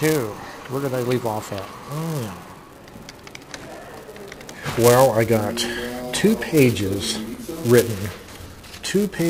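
Buffer tearing runs throughout: a small slice of each 128-sample buffer replays audio about 5 ms old, giving a 375 Hz rattle, seen as evenly spaced vertical streaks during signal.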